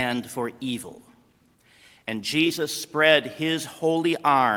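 There's a call bitrate drop from 0.85 s to 2.75 s. The audio turns coarse, with the top end dulled, for about 1.84 s. That fits the encoder being squeezed from roughly 48 kbps down to around 17 kbps before recovering.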